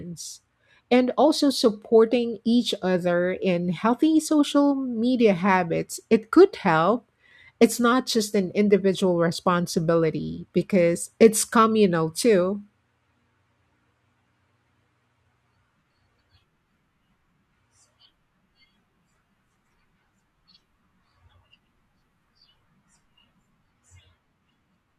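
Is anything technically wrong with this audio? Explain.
No, nothing technically wrong turns up anywhere in this speech recording.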